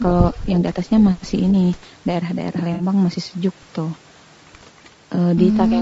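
Throughout the speech, the grainy, rough texture most likely comes from low-delay AAC compression around 32 kbps. AAC-ELD's short frames resolve pitch harmonics coarsely, so noise fills the gaps between them. The damage is plainly audible, and the top band stops at about 8 kHz.

From 0.32 to 0.46 s, an echo leak is the likely cause of a faint delayed copy of the voice. A far-end echo canceller failed to remove all of its loudspeaker's sound, returning it about 313 ms late and roughly 30 dB down.

From 2.73 to 2.83 s, AAC frame loss with concealment sounds like a brief smeared, noisy patch. About 60 ms of audio went missing, which fits three lost 20 ms frames, and the decoder filled the gap by extrapolating from the last good spectrum.

A weaker echo leak returns from 4.78 to 4.90 s at the same 313 ms delay, about 35 dB below the speech. A single 20 ms concealed frame at 5.15 s adds a short smear.

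From 5.71 s to the end, a third faint echo leak overlaps speech suppressed in double talk. The canceller, likely hearing both sides at once, pulled the talker down by about 10 dB, so the voice sinks for roughly 100 ms.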